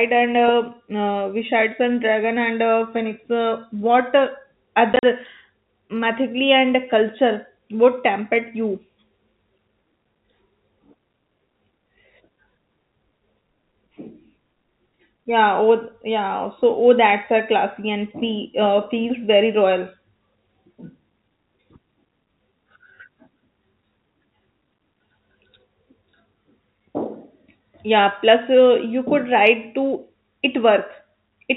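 From 4.93 to 5.03 s, packet loss filled with silence cuts holes into the speech. About 60 ms goes missing, the longest gap 40 ms, with hard edges.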